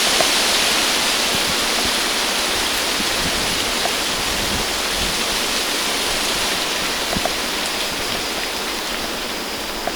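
USB whine enters at 3.47 s and continues to the end of the clip, a steady tone fixed at 1 kHz that sits roughly 25 dB below the sound itself. A USB device draws current in bursts locked to the bus's 1 ms frame timing, and that periodic load leaks into the audio path through shared power or ground. The result is a thin, constant whine that stays at the same pitch under everything else, from its entry onward.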